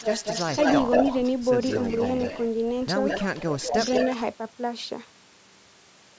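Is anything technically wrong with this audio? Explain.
Yes, there are two faults in this speech clip.

Echo leak occurs from 0.0 to 1.31 s, from 1.6 to 2.49 s and from 3.08 to 4.25 s. A delayed copy of the speech trails the original by about 190 ms. It is roughly as loud as the speech in the first stretch, much quieter in the second, and only a little below it in the third. The likely cause is a far end playing the call through a loudspeaker while its echo canceller failed to remove what the microphone picked up, so that sound came back down the line.

Speech suppressed in double talk occurs from 3.68 to 3.78 s, during the third echo stretch. For about 100 ms the talker's level sags by roughly 10 dB, which sounds like a brief dip or gap. This is likely the echo canceller treating overlapping sound from both ends as echo and turning everything down, so the near-end talker is attenuated along with the leaked copy.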